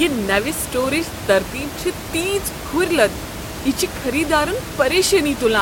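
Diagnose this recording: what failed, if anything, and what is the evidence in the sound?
Nothing has failed here, as far as I can hear; the only thing under the speech is the room's own background noise, sitting about 11 dB below it, which belongs to the recording and isn't a fault.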